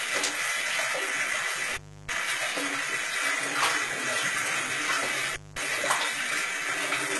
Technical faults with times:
0.00-7.20 HE-AAC compression
1.71-2.15 intermittent contact
5.33-5.58 intermittent contact

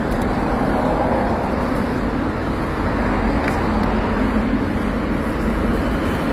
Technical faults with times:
0.00-6.32 transcoding between lossy codecs

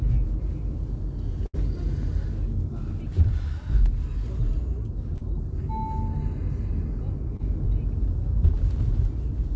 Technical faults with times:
1.46-1.55 burst of packet loss
5.17-5.23 short concealed packet loss
7.37-7.41 short concealed packet loss

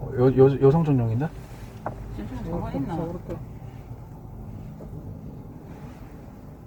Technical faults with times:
0.00-6.67 Opus compression

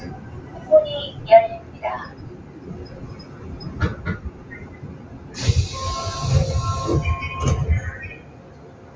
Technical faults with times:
0.00-8.96 noise suppressor applied to music or sounds
1.62-1.82 sound cut by the noise suppressor
2.36-2.59 sound cut by the noise suppressor
4.27-4.49 sound cut by the noise suppressor
5.03-5.30 sound cut by the noise suppressor
8.17-8.96 sound cut by the noise suppressor

